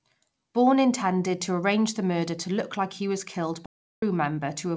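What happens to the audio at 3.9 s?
An audio dropout to silence, likely from lost input recorded as silence, spans 3.66 to 4.02 s. After "like he was killed", sound stops dead.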